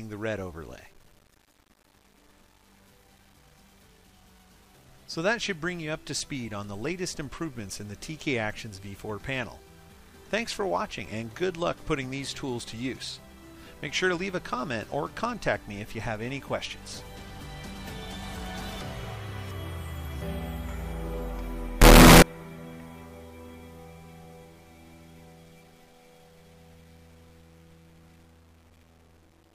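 From 21.82 to 22.22 s the sound bursts into very loud, harsh distortion, with quiet moments blasting as hard as the rest. This is likely signed and unsigned mixed up on the 8-bit samples, flipping the top bit so each zero crossing leaps across the full range.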